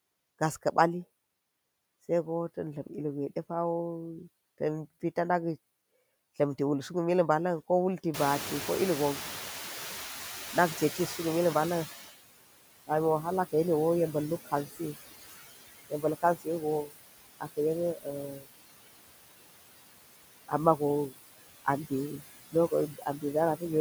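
A speech recording with noise suppressor artifacts throughout: the suppressor pulls the background down by about 18 dB frame by frame, so the residual noise dips between phrases and swells back under the speech. Around 8 s the room noise jumps by about 22 dB, settling about 12 dB below the speech, and the noise suppressor is caught up short. From 8.13 to 12.08 s the louder noise passes through with less reduction at first, then sinks by about 14 dB over those 3.95 s as the noise estimate adapts. Later, speech is cut by the noise suppressor at 14.46–14.96, 15.9–16.95, 17.95–18.48, 20.48–21.17 and 21.65–23.24 s. In each window the suppressor mistakes parts of the voice for noise and drops them by about 14 to 21 dB, for brief stretches totalling roughly 150 to 300 ms, so those parts of the speech sound swallowed or faint.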